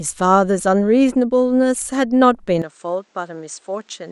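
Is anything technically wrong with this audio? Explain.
Yes. At 2.62 s the input likely switched to a poorer device. Its narrower band stops at 8.8 kHz. The sound turns dull and quieter, with faint new noise.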